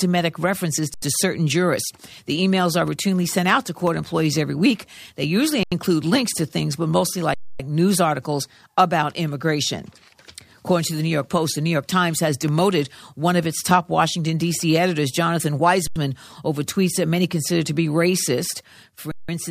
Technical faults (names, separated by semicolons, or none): underrun with held sample